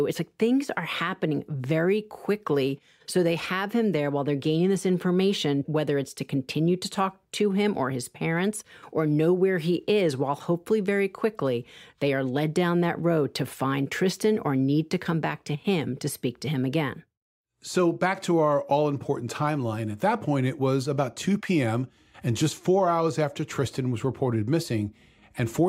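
No technical faults are audible anywhere in the recording.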